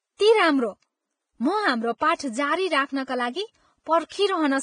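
Vorbis compression damage runs throughout the speech, likely from a low-quality Vorbis encode consistent with roughly 22 kbps. Nothing survives above 9.7 kHz, and the remaining treble is quantised so coarsely that the speech turns hissy and grainy, with roughened tone and smeared onsets.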